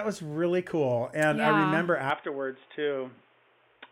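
At 2.10 s, after "I remember", the speech turns dull and boxy, likely an input switched to a poorer device; the spectrogram shows nothing above 3.6 kHz, plus a faint new noise floor.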